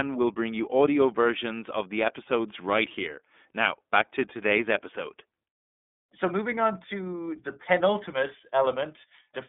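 Speech carried through the iLBC codec for its whole length, with plainly audible coding damage: a slightly rough, synthetic edge, since each frame's excitation is coded on its own. The band is telephone-like, about 250 Hz to 3.6 kHz, and nothing appears above 3.8 kHz. A spectrogram shows a flat, empty ceiling there and a thin low end. The roughness fits 30 ms frames at a low bitrate near 13 kbps.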